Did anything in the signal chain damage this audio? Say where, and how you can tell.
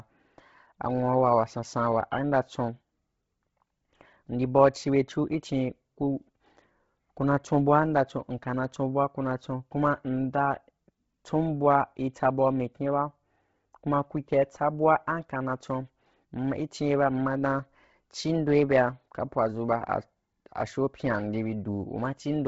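Yes. For the whole clip the speech has a breathy, grainy edge, as if a thin hiss were woven into the upper consonants, and nothing at all reaches above about 7.7 kHz. The damage sits at the codec stage, likely Bluetooth LC3 compression. The encoder has zeroed much of the upper spectrum and filled it with noise. The heavy damage points to a low bitrate near 16 kbps, with 10 ms frames.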